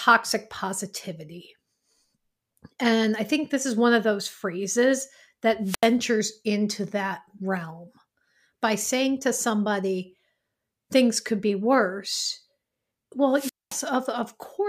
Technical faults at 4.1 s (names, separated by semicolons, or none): none